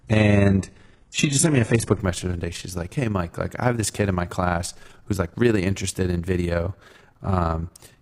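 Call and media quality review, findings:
Overlap-add ripple, whole clip: level flutters about 6 dB at around 20 Hz, rough robotic tremolo. Frame resynthesis in the processing chain, with window overlap not summing to constant gain. Strictly periodic at frame rate, unlike a modulation effect or gating.

Adaptive stream starting at a low bitrate, 0.0–2.0 s: dull, synthetic treble and stronger codec artefacts, fitting a low-rate HE-AAC start, top end limited to about 11.5 kHz. Abrupt improvement before "message one day", no dropout. Player rendition switch, not packet loss.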